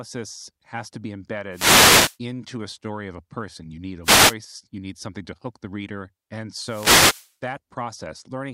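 At 1.51 to 2.18 s, 4.03 to 4.35 s and 6.57 to 7.35 s the speech is hit by bursts of static, a wireless microphone noise hit each time as the FM radio link fades and receiver hiss surges. Unlike a digital dropout, the fault is heard as a noisy swish, not silence.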